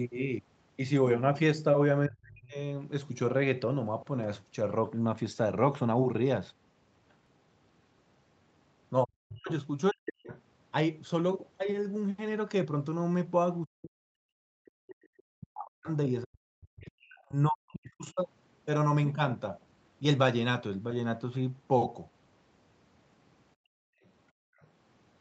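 Speech, carried over a call path whose audio stops at about 8 kHz, with several echo-control and recording faults. The speech is suppressed in double talk three times: from 2.07 to 2.57 s, from 9.04 to 10.29 s, and across a longer stretch from 13.64 to 18.2 s, where roughly four seconds are affected. In each, the talker's level dips by as much as about 40 dB, with the voice thinning and breaking up. This is likely an echo canceller that heard both sides at once, could not separate the near talker from the loudspeaker signal, and attenuated everything. Audio is missing between chunks at 7.26 s and 17.24 s, two skips about 10 s apart, each losing around 20 ms with the two sides butted together. The fixed spacing likely points to a recorder or processor working in 10-second blocks and dropping a sliver at each handover. The other side's voice is leaking through in short scraps at 10.3 to 10.41 s, at 15.18 to 15.23 s and at 24.61 to 24.67 s. 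These are faint, about 25 dB below the speech in the first case and about 35 dB below in the other two. This is likely residual loudspeaker echo that the canceller failed to remove from the microphone. Finally, the background is gated by the echo canceller from 23.55 to 24.6 s. The room sound drops by up to about 40 dB for roughly 0.7 s in total while the canceller clamps the microphone during loudspeaker playback, then returns when it releases. The leaked fragment at 24.61 s follows directly as the gate opens.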